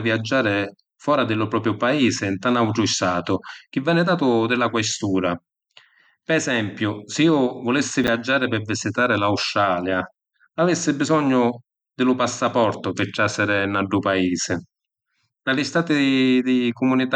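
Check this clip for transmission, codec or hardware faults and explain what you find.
One transmission fault turns up, at 8.04 to 8.08 s. It is chunks out of order. A 10 ms chunk arrives three chunks late. It then plays after the three chunks that should have followed it. No audio is lost. The order within those 40 ms is scrambled instead. Each misplaced edge makes a hard join, three in all. The speech briefly sounds jumbled there.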